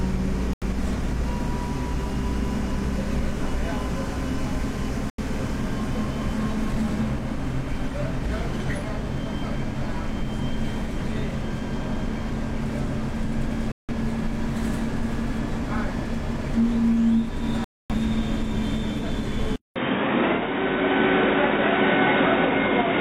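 Digital broadcast dropouts hit at 0.53 s, 5.10 s, 13.72 s and 17.64 s. Each time the receiver stopped getting decodable frames and muted until clean data resumed. The holes lengthen through the clip: the first two last about 0.14 s, the third about 0.2 s, the fourth about 0.3 s. The lost audio amounts to whole frames of roughly 43 ms each. The everyday sound cuts abruptly to silence and picks up later, with the missing stretch simply gone.

From 19.56 s to the end, the sound goes quiet for about 200 ms and then returns narrower and boxier, with nothing above 3.8 kHz. The level shifts by about 5 dB, and new background noise sits roughly 35 dB under the signal. This is likely an input switched to a poorer device. A second, band-limited input with its own gain and noise floor would account for the sudden change in tone.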